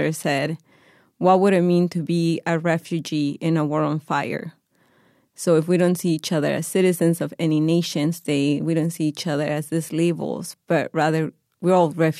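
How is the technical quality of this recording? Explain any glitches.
The technical quality of the recording is sound, with no glitches to explain.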